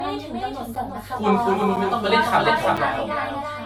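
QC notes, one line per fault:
Throughout: doubled audio track, a full-band copy about 5 dB quieter trailing by roughly 0.3 s, likely from a second capture path; waveform shows a repeated, undecayed echo envelope.
Throughout: generation loss, smeared, swirly, hollow speech likely from repeated AAC re-encoding, roughly seven passes; spectrogram shows accumulated holes and nothing above 18.6 kHz.
0.75, 1.76, 2.77 s: gap between chunks, hard-edged 7 ms silences at one-second spacing where chunks join; waveform shows flat dropouts, spectrogram thin vertical blank stripes.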